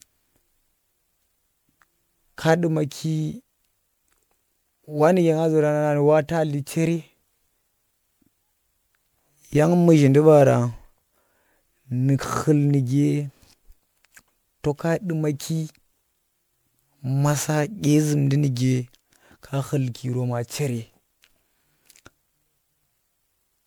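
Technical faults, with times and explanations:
throughout, generation loss: the speech sounds swirly, smeared and hollow, with blurred attacks and nothing above 20.9 kHz. This is likely MP3 re-encoded about five times, fitting 128 kbit/s. Each pass requantises on a shifted frame grid, so noise and spectral holes pile up.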